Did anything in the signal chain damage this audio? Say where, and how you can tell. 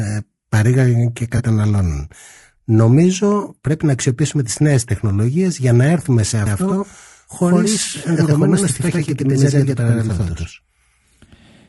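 Yes. Throughout, the speech sounds rough and grainy, with noise between the harmonics and a thin, synthetic top. That's likely low-delay AAC compression (AAC-ELD) at around 32 kbps.

There are two AAC frame losses with concealment: a brief smeared, noisy patch at 1.37–1.41 s just after "παρήγαγαν και", and another at 3.41–3.45 s right before "πρέπει να αξιοποιήσουμε τις". Each sounds like one short frame patched from the previous spectrum.

From 6.46 s, just after "για να έρθουμε σε", a doubled audio track switches on abruptly and runs to the end. A dry, equally loud copy trails about a tenth of a second behind, likely from a second, slower capture path.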